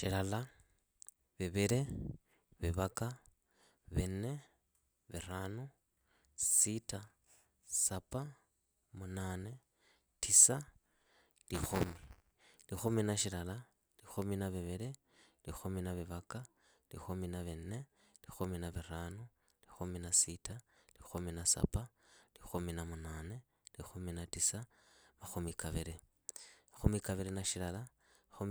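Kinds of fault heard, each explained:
Buffer tearing: from 11.54 to 12.34 s the speech picks up a gritty, robotic buzz at about 200 Hz. That's the writer and the playback hardware on the ring buffer drifting out of step, so every 5 ms period carries a small sliver of stale audio, roughly 15 ms old, butted against the current sound with hard edges on both sides. Those repeating splices give the rattle its pitch, and it rides along only while there's signal.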